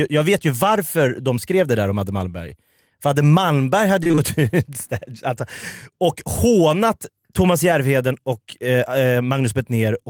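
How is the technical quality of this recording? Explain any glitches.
The recording has one glitch, a brief burst of repeated packet loss (robotic sound) between 4.03 and 4.19 s. In that stretch the stream kept losing or delaying packets, leaving four short holes, the longest about 21 ms. Each hole was papered over by extending the preceding sound, so roughly half of that 0.16 s span is patched rather than real. The speech there turns choppy, with small pieces audibly missing.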